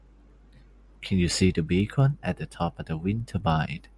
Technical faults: resampler restarted on every block

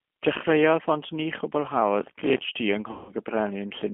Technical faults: G.729 codec; processor overload crackle; VoIP packet loss concealed by the speech codec

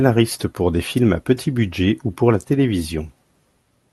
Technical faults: none

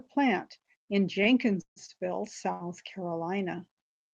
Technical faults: short stall from a late packet; call audio freeze

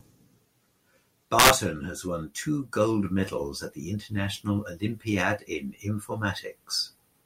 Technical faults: integer overflow

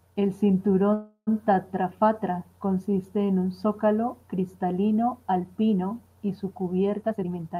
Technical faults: call audio freeze; jitter buffer speed-up

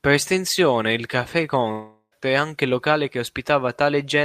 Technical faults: long network dropout

